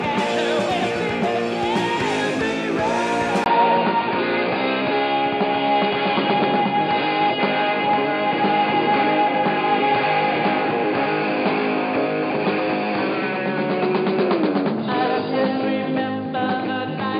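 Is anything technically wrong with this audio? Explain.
Yes. An input switched to a poorer device at 3.44 s and stays that way to the end. A brief gap of about 20 ms marks the change. After it, nothing above 4.8 kHz gets through, so the sound turns dull and boxy. A new background noise sits roughly 30 dB below the signal, while overall loudness stays about the same. This narrowband, noisier character is likely a different microphone or a headset's call profile taking over.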